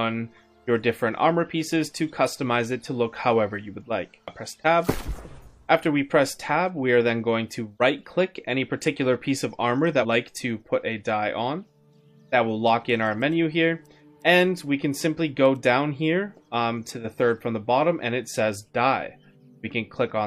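At 9.99 to 10.05 s, damaged data in the compressed stream makes the decoder misread corrupted frames and lose sync until it finds the next valid header, producing a brief glitch. On a spectrogram and waveform it shows as a short, abrupt disruption.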